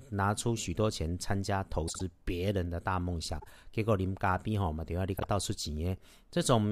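At 1.88–2.01 s, 3.40–3.47 s and 5.17–5.24 s, there are frames out of order: neighbouring blocks of about 52 ms, then 26 ms, 26 ms, swap places, causing a garbled flutter.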